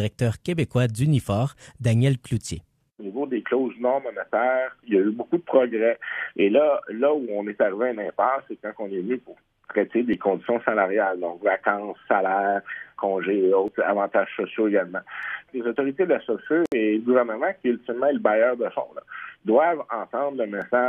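At 16.66 s a gap at a join of encoded pieces opens for 64 ms, ending at 16.72 s. Encoder delay and last-frame padding from separate encodes were left in. Unlike a dropout, nothing is lost: the sound resumes exactly where it stopped, with smeared edges.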